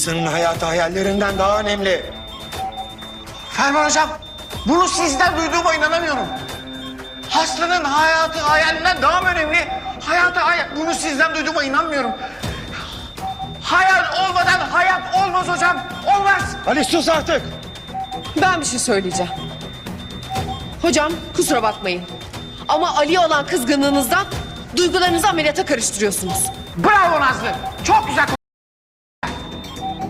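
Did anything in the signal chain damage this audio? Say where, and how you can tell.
Yes: from 28.35 to 29.23 s the sound cuts to silence for about 0.88 s, an audio dropout to silence, likely a lost input link recorded as silence.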